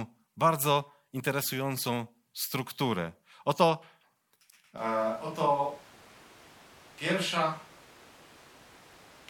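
At 4.78 s the speech switches abruptly to a distant microphone sound that lasts to the end. It is roomy, hollow and thinner in the bass, about 5 dB quieter, with room noise around 25 dB below the voice. The close microphone's signal was likely lost.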